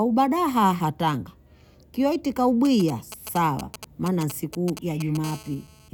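From 2.65 to 5.25 s, just after "aha tanga kiwa iti", GSM signalling bursts from a nearby 2G phone are rectified by the audio circuitry, producing galloping ticks and short 217 Hz buzzes roughly 10 dB below the speech. At 5.25 s the phone settles into a call, and steady GSM phone buzz follows until 5.89 s: a raspy 217 Hz tone rich in harmonics, about 21 dB below the speech.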